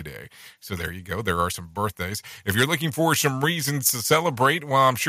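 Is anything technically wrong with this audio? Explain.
Yes, there's microphone overload in two spots. From 2.49 to 2.64 s, between "are some birthdays" and "looking for some reasons," the peaks flatten off with a harsh crackle. A shorter burst follows at 4.11 to 4.16 s, just after "for some reasons to." The likely cause is input gain set too hot, driving peaks about 6 dB and then about 3 dB past the converter's ceiling. Only a small fraction of samples gets sheared flat, but that's enough to hear as gritty distortion.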